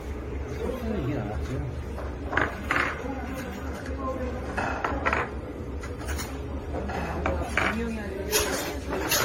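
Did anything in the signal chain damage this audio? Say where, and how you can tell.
Yes, at the codec stage: generation loss throughout. The audio sounds swirly, smeared and hollow, with blurred attacks and nothing above 16.6 kHz. That is likely from repeated AAC-LC re-encoding, around seven passes near 64 kbit/s, each re-quantising on a shifted frame grid.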